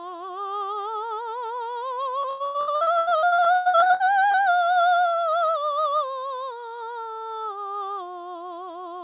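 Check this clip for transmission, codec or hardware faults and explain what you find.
Two faults stand out in this music clip, heard through a telephone-band call path with nothing above 4 kHz, which fits G.711 mu-law.

From 2.22 to 4.38 s there is repeated packet loss, giving a robotic sound. Twenty-two gaps, the longest 106 ms, are patched by stretching the preceding audio, so about 44% of that span is concealed sound. The result is a choppy stutter with pieces missing. A single click would not last this long, and here the holes keep recurring across the whole span.

At 4.96 s there is a single sharp click, most likely from dropped samples. Roughly one sample, about 0.02 ms, goes missing, so the waveform jumps abruptly. Nothing audible is removed. This sets it apart from the packet-loss stretch, which leaves audible gaps and smeared repeats.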